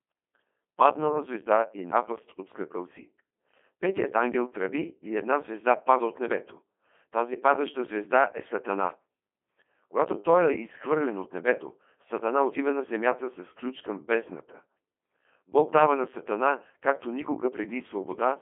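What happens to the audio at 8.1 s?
At 8.1 s the speech sounds robotic and buzzy, with nothing above about 3.5 kHz, as it does throughout the clip. This is Codec 2 vocoder damage, consistent with a 2.4 kbit/s mode: only pitch, voicing, energy and envelope survive, and sine-wave resynthesis replaces the original waveform.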